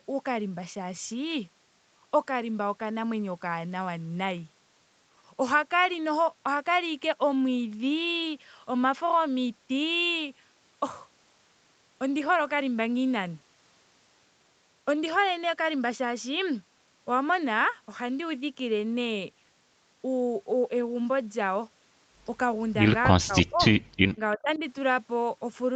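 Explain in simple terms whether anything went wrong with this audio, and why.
Speech suppressed in double talk, from 23.2 to 23.61 s and again from 24.15 to 24.61 s. The sound drops to near silence the first time and turns noticeably quieter the second. Both people likely talked at once, and the call's echo canceller, unable to tell the speaker apart from the returning loudspeaker sound, turned both down.

Echo leak, from 24.54 to 24.59 s. A faint, brief delayed copy of the sound arrives about a third of a second late. The other side's loudspeaker likely fed the microphone, and its echo canceller didn't fully remove that before sending it back.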